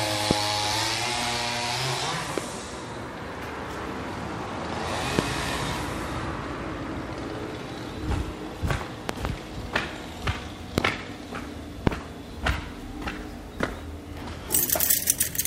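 Loud pops at 0.31, 2.38, 5.19, 10.78 and 11.87 s, plus a double pop from 9.09 to 9.27 s, sit roughly 20 to 25 dB above the sound. They are likely voltage pulses, seen as tall waveform spikes and full-height spectrogram stripes.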